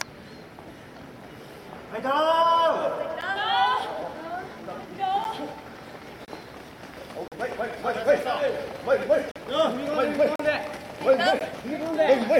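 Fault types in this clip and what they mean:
gap between stream segments: hard-edged silent holes of about 4 to 43 ms fall on one-second segment boundaries, where time stamps leave a gap the player fills with silence.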